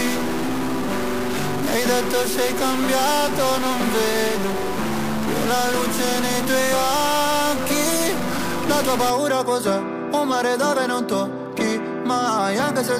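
From 0 to 9.1 s the audio carries a harsh, buzzy distortion. Quiet gaps are not silent. They fill with a steady noise. This is a stuck bit, likely from one data line held at a fixed value in the converter or its wiring. About half the samples land off by one fixed step, roughly -25 dBFS in size. The error tracks the waveform, so the buzz moves with the sound. At 9.1 s the distortion ends.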